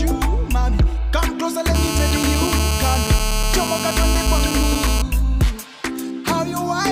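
GSM phone buzz runs from 1.75 to 5.02 s: a nearby 2G handset on a call transmits in bursts about 217 times a second, and the audio circuitry rectifies those radio pulses into a hard, raspy 217 Hz buzz rich in harmonics. It holds steady throughout, sitting about 6 dB below the sound.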